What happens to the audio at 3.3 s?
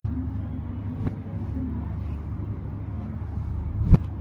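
At 3.3 s the resampler restarted on every block is in effect, as it is for the whole clip. Each 50 ms block is converted separately, likely from 44.1 to 48 kHz, so every block edge carries an error, heard as a 20 Hz ticking buzz under the signal.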